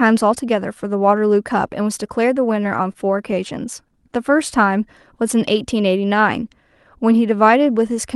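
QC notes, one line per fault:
2.53–3.34 s, repeated stalls (stutter): six brief holds, the longest about 22 ms, about 68 ms in all. Late packets emptied the jitter buffer each time, so the last sound was stretched to cover. Nothing is lost, but the speech drags and stutters.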